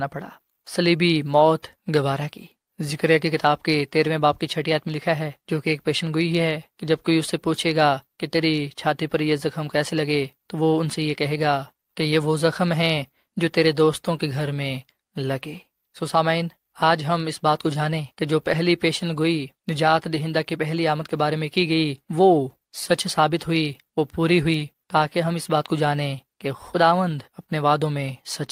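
At 18.51 to 18.53 s the speech turns briefly rougher and noisier, with no gap or dropout. This is a lost packet rebuilt from error correction: a 20 ms stretch, which fits a single lost packet, was filled from the lower-bitrate backup copy carried in the following packet.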